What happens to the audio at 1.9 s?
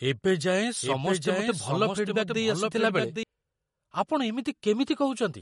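At 1.9 s the speech is heard twice. A doubled audio track runs from 0.81 to 3.23 s. A second copy trails by roughly 0.7 s, a few dB quieter, likely from a duplicated path. The speech also has the watery swirl of MP3 compression. Nothing sounds above 11.2 kHz, which likely fits a low bitrate near 48 kbps.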